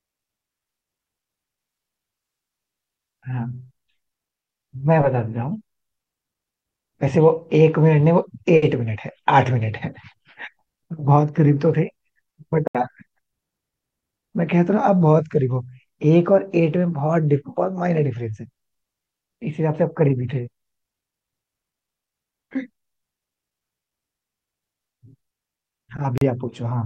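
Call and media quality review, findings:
Bluetooth stall, 12.68–12.75 s: speech drops to dead silence for 72 ms, then resumes. Likely a wireless link stall: interference delays packets, headphone buffer empties, playback halts until retransmissions land.

Bluetooth stall, 26.18–26.22 s: same symptom, shorter, a 36 ms gap of silence before the sound continues. Likely the same mechanism: buffer underrun on the receiving side while resent audio catches up.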